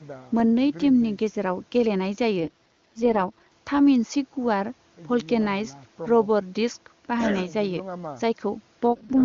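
Around 2.40 to 3.52 s, and again from 8.92 to 9.23 s, the speech turns raspy and synthetic with no gap and no loss of band. That's an AMR rate drop, which fits the AMR-WB link falling from 23.85 to about 6.6 kbit/s.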